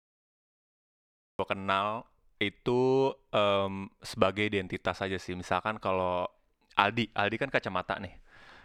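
The clip is speech, and it has a cut-off start. The first 1.39 s are digital silence. At 1.39 s the audio begins abruptly, partway through a sound. There is no natural onset and no fade-in. The level jumps straight from nothing to full speech. This happens when recording or streaming starts late, so the opening of the utterance was never captured. What came before that point is simply missing.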